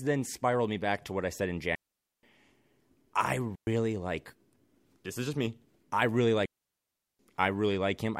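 Speech with three digital wireless dropouts, the receiver muting into clean near-silence without noise bursts: 1.75–2.23 s after "what I said in", 3.55–3.67 s, and 6.45–7.19 s after "just me I really".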